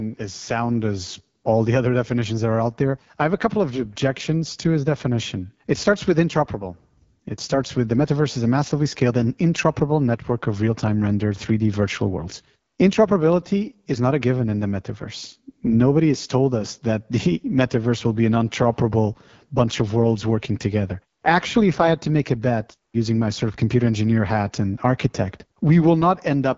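Throughout the clip the speech has passed through the AMR wideband (HD Voice) codec at a low rate, likely near 8.85 kbit/s. Its vocal tract model is starved of bits, so the speech sounds plainly rough and raspy, with nothing above 7.5 kHz.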